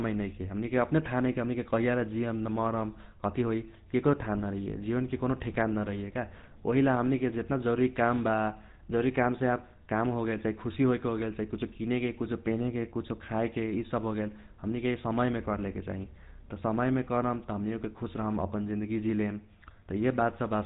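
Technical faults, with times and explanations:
throughout GSM full-rate codec: the speech carries a plainly audible buzzy, gravelly roughness and a dull, band-limited top with nothing above 3.8 kHz. The codec rebuilds the voice from a vocal-tract model fed by sparse, regularly spaced pulses, which fits a 13 kbps GSM full-rate stream.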